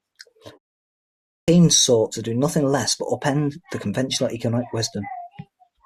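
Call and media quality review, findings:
Clipped start after a pause at 1.41–1.48 s: speech resumes abruptly after about 0.9 s of silence, first 69 ms gone. Probable output device dozing in silence, slow to wake and relock.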